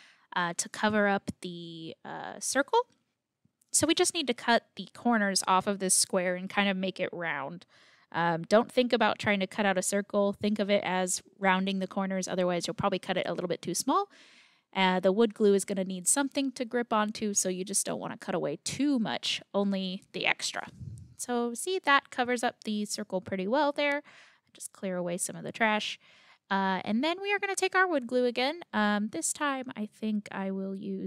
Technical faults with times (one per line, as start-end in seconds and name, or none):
23.92 bit error spike